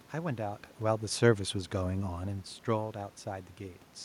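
Listening to this speech recording, nothing stood out as a technical problem; the room's background noise and the talker's shifts in distance from the microphone around 0.5 s and 2 s are simply part of the recording.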